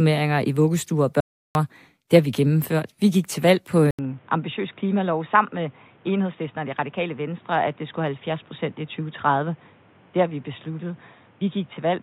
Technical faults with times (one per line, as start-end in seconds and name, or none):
1.20-1.55 audio dropout to silence
3.91-12.02 input switched to a poorer device